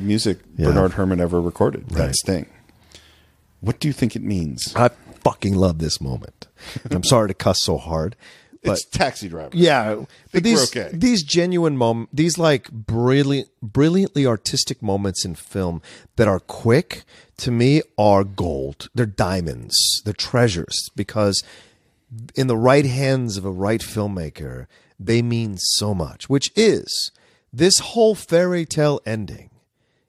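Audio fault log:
No faults are heard in the speech recording. There is nothing to log for any part of it.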